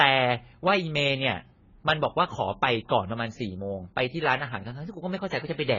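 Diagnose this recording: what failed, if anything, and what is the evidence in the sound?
The codec stage failed: heavy lossy compression, likely AAC-LC starved of bits, throughout the recording. The encoder ran out of bit budget, cut its bandwidth and quantised the remaining frequency lines coarsely. The spectrum stops dead at about 7 kHz from start to finish, leaving the speech dull and smeared, and sibilants and held vowels carry a warbling, fizzy texture. That level of damage fits a bitrate in the region of 16 kbps.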